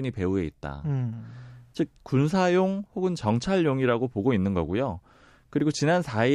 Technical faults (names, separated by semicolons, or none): none